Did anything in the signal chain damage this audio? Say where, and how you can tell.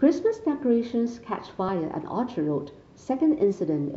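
Yes. The damage is at the codec stage: damaged data in a compressed stream. At 1.67 s the speech is briefly disrupted. Corrupted bytes made the decoder misread those frames, lose sync and resume at the next valid frame header.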